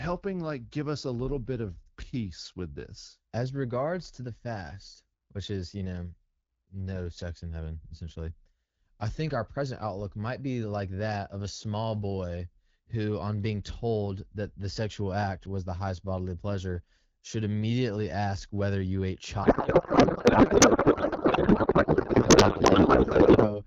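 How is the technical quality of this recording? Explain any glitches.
The recording has one clear glitch near the end. The speech runs through AMR wideband (HD Voice) coding, with light codec colouring that fits a 12.65 kbit/s rate.

From 19.43 s to 23.60 s there is a codec payload misread. The AMR frames appear to be unpacked with the wrong bit layout. Speech becomes garbled noise and warble that barely tracks it.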